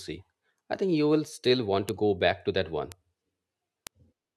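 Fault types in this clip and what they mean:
Bit error spike: a single flipped bit makes one or two samples jump and snap back. Three sharp ticks sound, at 1.89, 2.92 and 3.87 s.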